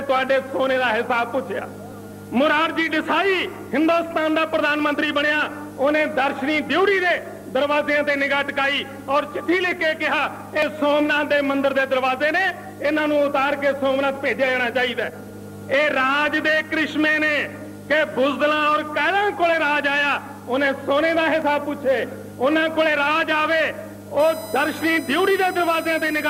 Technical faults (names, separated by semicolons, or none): dropped buffer (overrun); USB whine